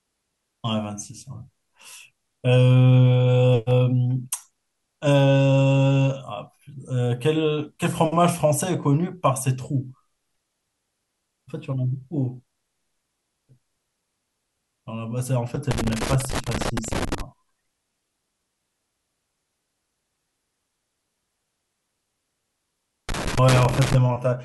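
Loose connector crackle breaks into this speech clip twice, from 15.71 to 17.21 s and again from 23.09 to 23.95 s, as an irregular scratchy burst. A worn or dirty contact is intermittently opening and closing, chopping the signal and throwing pops wherever DC sits on the line.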